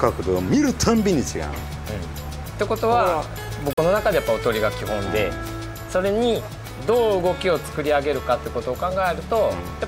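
Bluetooth dropout at 3.73 s: the sound cuts out and returns at 3.79 s, leaving a gap of about 60 ms. The cause is likely a wireless link that failed to deliver audio packets to the headphones on time, so the receiver discarded them and output silence. Roughly 43 ms of audio goes missing, which fits two lost packets. When playback resumes, the material picks up further along, as though it had kept playing through the hole.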